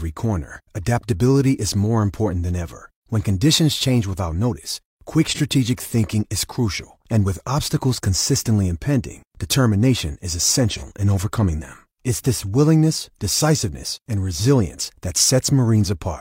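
A brief smeared, noisy patch interrupts the speech at 5.29 to 5.40 s, right after "change without notice quick" and before "thinking is crucial and", and the same blurred texture returns at 10.71 to 10.83 s, between "consistently impending determination is" and "in overcoming them". Both are AAC frame loss with concealment. Each gap fits one dropped frame of about 43 ms, which the decoder papered over by reusing the previous spectrum.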